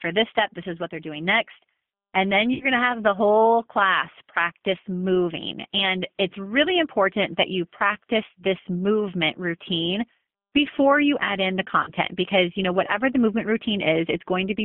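Throughout, the speech carries G.729 codec damage. The band runs only from about 150 Hz to 3.5 kHz. The sound is rough and slightly synthetic, which fits an 8 kbit/s G.729A coder rebuilding speech from a filter, pitch and a few pulses.

At 2.54 s there is VoIP packet loss concealed by the speech codec. About 60 ms is missing. The decoder stretches the last sound into a fading buzzy tone or coloured noise until 2.66 s, just before "to have the whole". At 11.83 s, after "you add in the", a 40 ms gap is concealed the same way. The concealed stretch runs until 11.91 s, just before "because you know whatever".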